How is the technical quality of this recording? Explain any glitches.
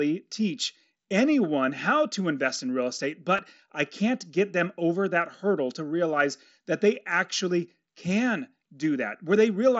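There's one brief glitch over the mSBC Bluetooth headset link. At 3.37 s, between "invest in real estate" and "I can't get them", concealed Bluetooth headset packet loss fills a 15 ms gap by repeating the last stretch of waveform, leaving a brief buzzy tone with a small warble where speech returns.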